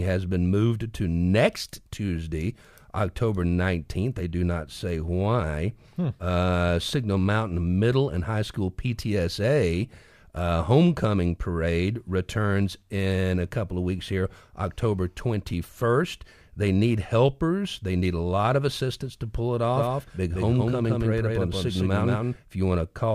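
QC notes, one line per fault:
19.76–22.36 s, doubled audio track: after "assistance to pull it", a second full-band copy trails by roughly 150 ms at about equal level, likely from a duplicated capture path. The waveform shows every burst repeated, and the spectrogram shows each band echoed, with abrupt onset and cutoff.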